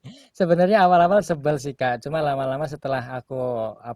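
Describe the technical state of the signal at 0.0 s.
At 0.0 s the speech signal is intact, with no technical fault present at that moment.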